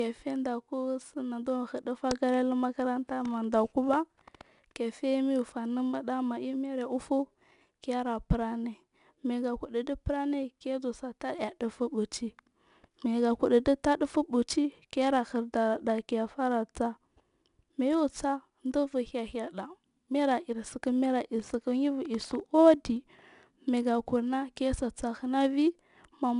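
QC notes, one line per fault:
throughout: 4-bit ADPCM compression. Each sample is stored as a coarse 4-bit step from a prediction, so gritty hiss rises and falls with the speech. A spectrogram shows broadband noise under loud syllables and nothing above 10.6 kHz, which fits roughly 89 kbps.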